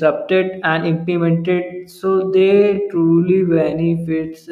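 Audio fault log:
1.50–4.51 s, time-stretched section: from 1.50 s to the end, the speech suddenly drags to about 0.65 times its earlier pace while the pitch stays put. That's most likely software stretching this stretch to fill a longer slot, keeping pitch by repeating short slices of the audio.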